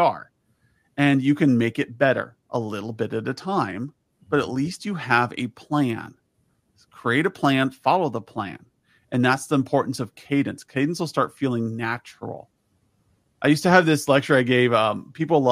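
No technical faults can be heard anywhere in the recording.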